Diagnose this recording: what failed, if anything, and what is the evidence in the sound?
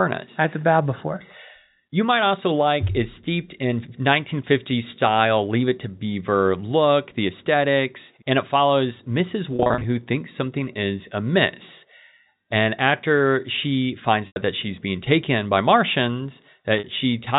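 Network packet loss with pitch repetition at 9.56–9.84 s, 14.27–14.36 s and 16.79–16.84 s: the receiver repeats the last pitch period over each gap, producing brief buzzy holds.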